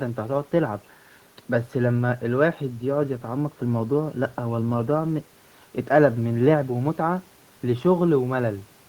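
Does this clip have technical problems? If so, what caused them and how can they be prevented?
No, nothing stood out as a technical problem on listening, so there is nothing here that needs preventing.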